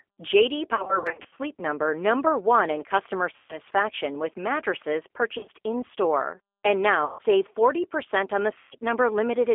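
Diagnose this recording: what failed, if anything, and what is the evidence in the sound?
The codec stage is at fault throughout: the speech has the rough, slightly synthetic quality of the G.729 codec, plainly audible, with the bandwidth confined to a telephone line of about 300 Hz to 3.4 kHz. The 8 kbit/s coder rebuilds each short frame from a vocal-tract filter, a pitch predictor and a few pulses, so fine detail is replaced by a buzzy approximation. On a spectrogram, energy stops sharply near 3.4 kHz, with nothing below 300 Hz.

At the network stage, VoIP packet loss concealed by the speech codec interrupts the speech five times. The first is a scattered stretch from 0.75 to 1.39 s, with gaps of up to 60 ms. The others fall at 3.36 to 3.59 s, between "in customer" and "with mattresses"; at 5.38 to 5.49 s, after "with mattresses"; at 7.05 to 7.22 s; and at 8.58 to 8.75 s, after "on the". 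During each gap the decoder repeats its last pitch and filter at falling gain, smearing the speech into a fading buzzy tone or coloured noise. On a spectrogram this appears as flat, repeated harmonics. On the waveform it shows as decaying periodic cycles that recover slowly once packets return.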